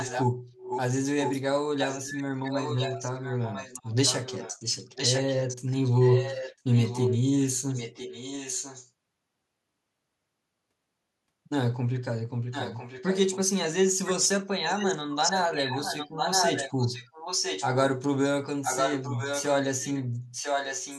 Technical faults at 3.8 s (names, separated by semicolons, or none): echo leak